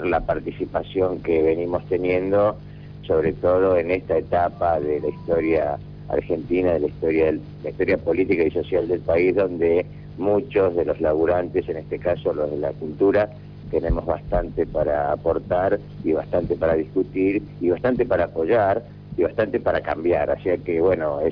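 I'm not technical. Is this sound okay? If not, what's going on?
Yes, it's fine: nothing in it sounds broken or off, so there's nothing to worry about here.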